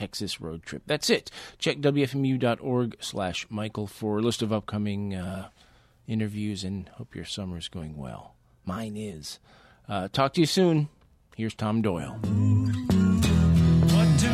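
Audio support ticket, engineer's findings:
No fault reproduced on listening; nothing found to attribute to any component in the playback or capture chain.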